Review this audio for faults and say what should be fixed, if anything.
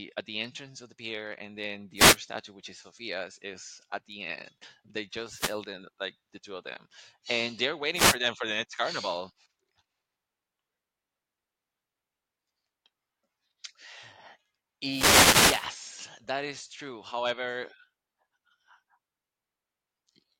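Wireless microphone noise hits at 1.96–2.17, 5.29–5.60, 7.94–8.17 and 14.87–15.70 s: the FM radio link fades as reflected signals cancel, so receiver noise rises through the speech as bursts of static, longest at 15 s. Use diversity receivers, shorter antenna distances and clear line of sight.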